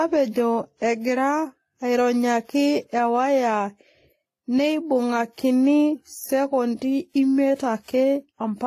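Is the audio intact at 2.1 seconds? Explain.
No. At 2.1 seconds, as throughout the clip, the sound is not intact. Nothing is present above about 14.9 kHz, and several kinds of coding artefact are heard together, likely from transcoding between lossy codecs. The pattern points to a chain of WMA, then HE-AAC at a low rate, then Vorbis. Each stage re-encodes the previous stage's damage and adds its own. That mixture of overlapping artefact types, rather than one consistent texture, is what separates this from a single low-bitrate encode.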